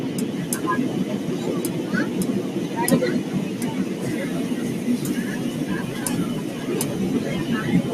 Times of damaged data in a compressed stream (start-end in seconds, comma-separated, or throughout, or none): none